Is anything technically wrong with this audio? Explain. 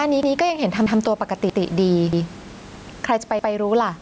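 Yes, two faults are audible.

Overlapping chunks: at 0.23, 0.86, 1.50, 2.13, 2.76 and 3.39 s, 132 ms of speech plays twice, producing a regular stutter every 0.63 s. This fits half-second chunks each starting before the previous one finished. Unlike dropouts, nothing is missing. Material is repeated.

Gain pumping: throughout, the level swings by around 10 dB, flattening dynamics, likely from excessive input gain driving a fast limiter. A noise gate would cut the background instead of swelling it.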